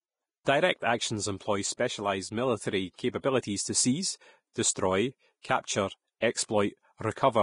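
Vorbis compression runs throughout. The audio is hissy and grainy, with nothing above 10.5 kHz, which points to a low bitrate of around 30 kbps. The likely cause is heavy Vorbis coding, quantising the treble so coarsely that its fine detail turns to noise.

Pre-echo occurs at 4.74 s, just after "to seize". A sharp attack sits late in a transform block, so quantisation noise sized for the loud onset spreads back about 17 ms into the quiet before it. The result is a brief hiss ahead of a softened, smeared attack.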